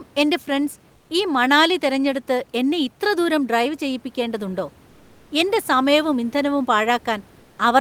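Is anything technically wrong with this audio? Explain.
Yes. In three pauses in the speech, from 0.95 to 1.09 s, 4.89 to 5.29 s and 7.39 to 7.57 s, the room's background, which sits about 32 dB under the speech, briefly turns into a flat, textureless hiss about 2 to 3 dB quieter. This is comfort noise in place of the background, likely from Opus discontinuous transmission: the sender stops coding during silence, and the receiver fills the gap with synthetic noise that only roughly matches the real background's shape.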